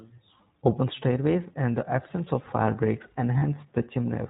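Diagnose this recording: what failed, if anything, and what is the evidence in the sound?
The codec stage is the culprit for the overall sound. The whole clip has that band-limited, slightly rough and synthetic character of the iLBC codec, with nothing above 4 kHz, so sibilants and airiness are simply gone. The damage is plainly audible throughout. iLBC codes each frame's excitation independently, and the texture here fits its 20 ms frame mode, roughly 15 kbps. That's a narrowband VoIP link doing what it does to speech.

The network is where the second problem comes in. Right after "absence of fire breaks", from 3.38 to 3.44 s, there's a short stretch of lost iLBC frames, about 40 ms, which fits two dropped packets. The decoder covers the hole by repeating the last pitch cycle with some noise mixed in, so you hear a brief held, slightly buzzy vowel instead of a silence. Since iLBC frames don't depend on each other, the speech snaps back cleanly straight afterwards.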